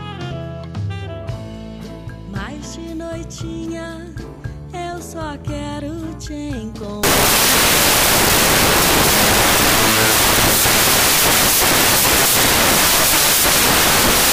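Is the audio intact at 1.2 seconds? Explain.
Yes, at 1.2 seconds the audio is intact, with no dropout, click, distortion or other fault at that moment.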